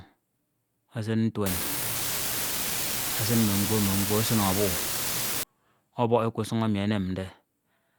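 A steady crackling fizz runs through the speech from 1.46 s to 5.43 s, carrying on through the pauses as well. It is an unreliable data bit: one marginal data line flips its bit in a random share of samples, so each error lands as an identical spike.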